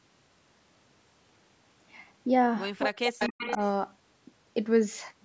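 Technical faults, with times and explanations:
2.87–3.59 s, speech suppressed in double talk: the speech dips and cuts out in pieces for about half a second in total, falling by around 40 dB at its deepest. This is likely an echo canceller that could not separate this talker from loudspeaker echo and turned both down.
3.19–3.70 s, echo leak: a second copy of the speech trails the original by 285 ms, around 10 dB quieter, overlapping the suppressed stretch. This is likely a loudspeaker end whose echo canceller did not fully remove what its microphone picked up, so the copy was sent back.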